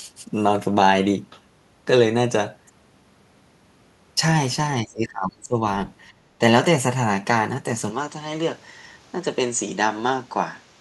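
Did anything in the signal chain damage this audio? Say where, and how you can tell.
Yes. Call processing damaged it first. From 4.83 to 5.59 s the speech sinks by roughly 25 dB in broken patches over about 0.7 s. This is likely speech suppressed in double talk, where the echo canceller mistook the near talker for loudspeaker echo while the far end spoke and attenuated both. On a waveform the envelope pinches in and out through that stretch. A spectrogram shows the upper harmonics thinning or vanishing in blocks.

Between 6.12 and 6.33 s the room tone drops by about 13 dB for roughly 0.2 s and then comes back. That is background gated by the echo canceller, which clamped the microphone while playback was active and released it right after. The noise floor shows a brief rectangular notch on the waveform, and on a spectrogram it is a short pale vertical band right across the spectrum.

At 7.90 s the capture stage changes, with no gap, and holds to the end. 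The sound turns duller, about 5 dB quieter, and narrower in band. A fresh noise floor sits roughly 30 dB below the speech. This is likely the input switched to a poorer device, a narrower microphone path with its own hiss. A spectrogram shows a hard ceiling appearing at 7.90 s, and the waveform steps down in level there.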